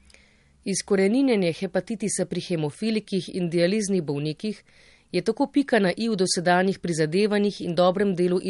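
Throughout the speech, the treble stops dead at 11.2 kHz and the codec damage is plainly audible: a watery, swirling quality, with metallic chirping on s sounds. These point to likely MP3 compression at a low bitrate, near 48 kbps, where the encoder drops high frequencies and weak spectral lines to save bits.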